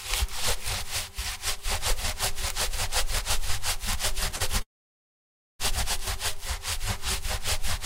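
A recording of sounds with two timing faults. At 4.36 to 4.42 s, a short stall from a late packet holds the last sound for 38 ms before resuming from the same point, so nothing is skipped, unlike a dropout. From 4.62 to 5.61 s, a call audio freeze adds about 974 ms. The last sound is continued briefly and then about 940 ms is silent, before the audio picks up exactly where it stopped. This is likely packets held up in transit that emptied the jitter buffer. It is a pause inserted into the sound rather than a section cut out of it.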